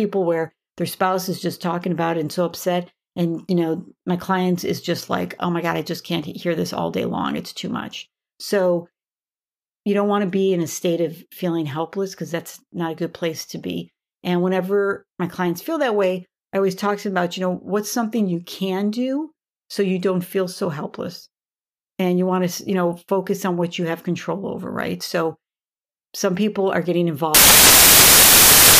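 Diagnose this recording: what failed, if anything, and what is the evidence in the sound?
Samples built from the wrong bytes, from 27.35 s to the end at 28.8 s, right after "some people are getting". This is a sample-format conversion failure: bytes are misassembled, so rapidly varying low bits dominate each value, producing loud, harsh broadband noise that replaces the speech.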